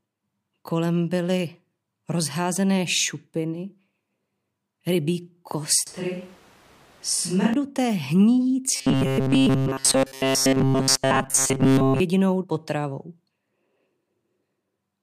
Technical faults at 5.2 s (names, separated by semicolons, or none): none